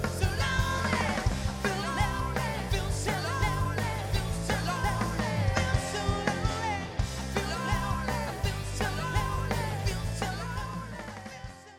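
Periodic USB or driver dropouts affect the audio from 3.14 s to 8.25 s. Every 1.024 s, about a millisecond of signal is replaced by silence. This is heard as roughly seven evenly spaced ticks. A background task stalling the bus or driver causes them.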